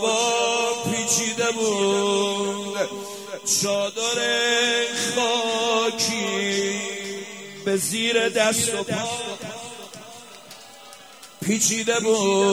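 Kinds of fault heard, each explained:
USB whine: the bus draws current in 1 ms frames that leak through power or ground, leaving a steady 1 kHz whine, strongest at 3 kHz, about 30 dB below the sound.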